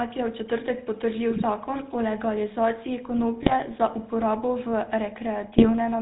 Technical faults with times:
0.00-6.01 GSM full-rate codec
1.30-1.43 GSM bit errors
3.42-3.53 GSM bit errors
5.58-5.71 GSM bit errors

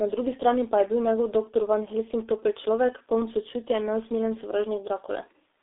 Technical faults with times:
0.00-5.62 G.723.1 codec

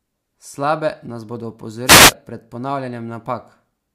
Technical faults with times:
1.85-2.13 wireless microphone noise hit

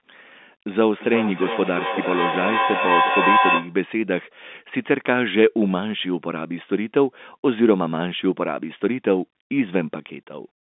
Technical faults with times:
0.97-3.78 feedback howl

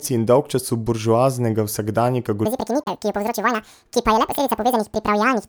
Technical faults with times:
2.45-5.49 section at the wrong speed
2.81-2.88 corrupt frame decoded

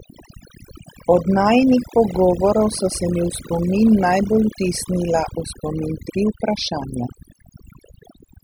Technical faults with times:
0.00-8.44 overdone noise removal

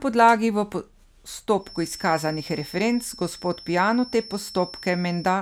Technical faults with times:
1.55-5.42 feedback whistle

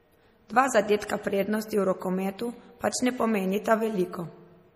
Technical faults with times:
0.00-4.75 low-bitrate audio saved at a high bitrate

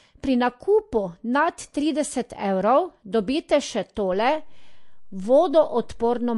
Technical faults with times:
0.00-6.38 MP3 compression

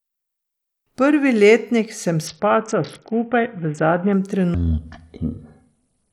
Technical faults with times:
2.27-4.13 Bluetooth SBC bit pool drop
4.54-6.13 section at the wrong speed

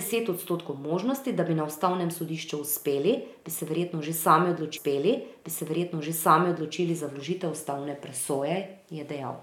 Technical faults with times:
4.76-6.76 stream segment repeated

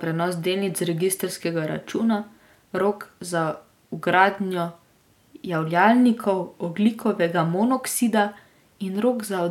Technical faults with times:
none

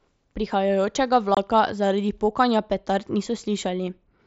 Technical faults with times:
1.35-1.37 unconcealed Bluetooth headset packet loss

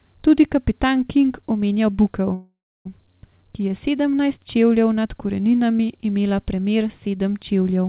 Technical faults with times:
0.00-7.88 low bit depth without dither
2.34-2.87 call audio freeze

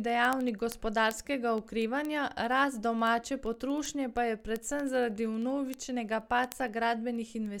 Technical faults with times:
0.17-7.54 word clock ticks

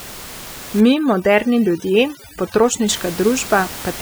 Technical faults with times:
0.80-2.88 overdone noise removal

